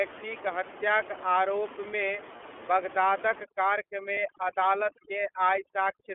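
Throughout, the speech sounds narrow, slightly rough and synthetic, confined to roughly 300 Hz to 3.4 kHz: this is the iLBC codec, whose coarseness fits its 13.33 kbps, 30 ms frame mode. At 2.36 to 2.41 s, and again at 4.14 to 4.18 s, a brief held, faintly buzzy vowel replaces the sound. These are lost iLBC frames: each time a single 30 ms frame went missing and the decoder repeated the last pitch cycle with noise, recovering at once. From 3.44 s to the end, the room noise, until then about 12 dB below the speech, drops and breaks up into twinkling specks. This is overdone noise removal: bands near the noise estimate are cut away along with quiet parts of speech.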